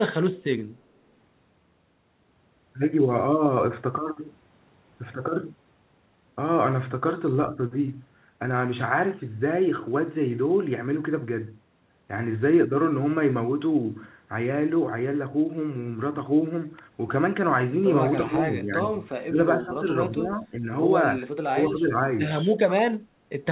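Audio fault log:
18.26–18.36, 18.52–18.97, 19.27–19.38, 19.57–19.85, 20.11–20.68, 21.21–21.27, 21.52–21.97 s: speech suppressed in double talk. The speech repeatedly ducks by about 10 dB, deepest near 19.3 s at about 20 dB and slightest near 21.2 s, over the already 4 kHz-limited call sound. The likely cause is an echo canceller failing to separate this side's talk from overlapping far-end echo and attenuating both.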